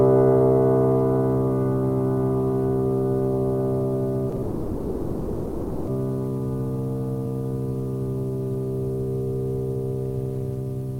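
At 4.29 s and again at 4.36 s there are two short stalls from a late packet: each time a packet missed its playout slot and the jitter buffer ran dry. The receiver held the last bit of music, for 30 ms and then 20 ms, before resuming from the same point, so nothing is lost but the sound briefly sticks.

From 4.42 to 5.89 s comes a call audio freeze, likely caused by packets being held up in transit and the jitter buffer emptying. The last sound is stretched across about 1.45 s without dropping to silence, then the music resumes exactly where it stopped, pushed later by that gap.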